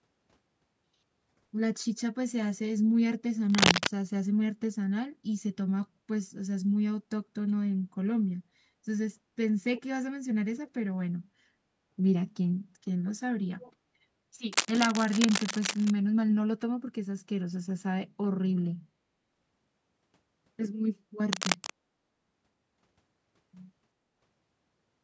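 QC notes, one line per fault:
3.50–3.87 s, 14.51–15.90 s and 21.32–21.70 s: cable scratch noise. Dense, uneven crackling rides over the speech each time. It is about 5 dB above the speech in the first burst, about 5 dB below it in the second, and roughly level with it in the third. The likely cause is a worn cable, connector or control being moved. Its contact resistance jumps rapidly, and that sprays ragged noise into the signal.
9.75–9.82 s and 13.61–13.72 s: echo leak. A faint copy of the speech returns 332 ms after the original, about 20 dB below it. Each scrap is brief. It likely comes from the far side's loudspeaker feeding its microphone. That echo canceller did not remove all of it, so a delayed slice was sent back down the line.
20.94–21.05 s: background gated by the echo canceller. The room sound dips by as much as about 19 dB for roughly 100 ms, then comes back. The canceller turned the microphone down hard while the loudspeaker played. 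It released once playback eased, so the background returns.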